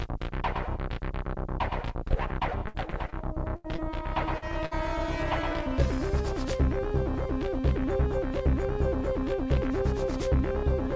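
At 2.08 to 2.12 s there is a short concealed packet loss: about 20 ms of audio arrived too late, and the receiver bridged the hole by extending the preceding sound before blending back, leaving a brief smear. At 4.38 to 4.44 s a second one covers about 40 ms and gives another quick wobble.

Between 2.68 and 3.80 s, repeated packet loss produces a choppy texture. Seven separate gaps, the longest 79 ms, were each patched by continuing the last sound. That makes about a fifth of the stretch synthetic, with fragments of the audio missing.

A burst of packet loss follows at 4.66 to 4.73 s. About 60 ms went missing in one run, and the concealment held and faded the last sound across the gap before playback resumed further on. Throughout, nothing sits above 8 kHz, which fits the wideband call codec on this path.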